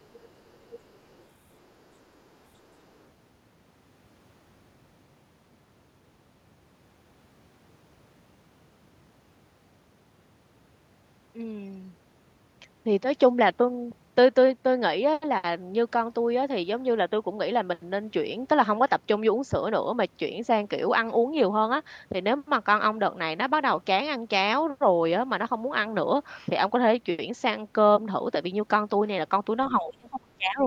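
From 0.02 to 1.29 s, 1.55 to 1.82 s and 2.94 to 3.04 s, the other side's voice leaking through appears as a separate, very faint voice rather than room reverb. It is likely loudspeaker echo left behind by the echo canceller. From 29.79 s to the end, speech suppressed in double talk pulls the talker down by around 30 dB, likely from the canceller ducking both sides at once. The voice dips in level.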